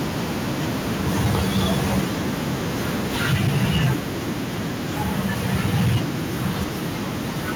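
Microphone overload from 0.99 to 2.04 s, 3.21 to 3.93 s and 5.05 to 5.97 s gives the loudest peaks a harsh, crackling edge. The likely cause is input volume driving the converter about 5, 7 and 8 dB past its limit, flattening a few percent of samples. At 3.34 s, the microphone volume stepped down: sound and background drop by about 2 dB at once, likely the call software cutting input level after the distortion.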